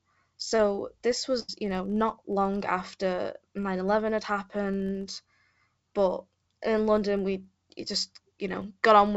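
A filter restarted on every block throughout the clip: it forgets its state and begins each block from silence, so every block opens with a small transient. The result is a steady buzz near 46.9 Hz, which fits a 1024-sample block, rising and falling with the speech level. Nothing is heard above 8 kHz, as expected from the call path's wideband codec.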